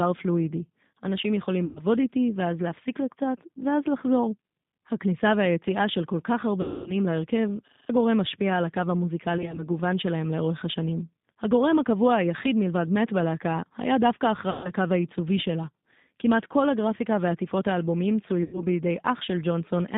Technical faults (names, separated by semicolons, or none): G.729 codec; VoIP packet loss concealed by the speech codec; system hang loop